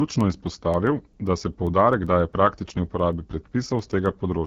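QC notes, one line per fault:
throughout: AMR wideband (HD Voice) codec. The speech has a rough, raspy, buzzy grain, the sound of this codec at one of its lowest rates, which fits the 8.85 kbit/s mode. The band stops near 6.4 kHz, with only thin shaped noise above it and nothing beyond 7.6 kHz. Unlike narrowband telephone coding, the top reaches past 3.4 kHz. Unlike MP3-style swirling, the damage is a pulse-excited buzz that follows the vocal tract model.
0.21 to 4.46 s: word clock ticks. About thirty sharp ticks land roughly every 0.15 s and vary in strength. A receiving device running on its own clock, off by something like 150 ppm, drops or repeats one sample each time the two clocks slip past each other. Dropouts leave gaps and crackle falls at random, but these ticks are brief and keep a steady rate from start to finish, whatever the speech is doing.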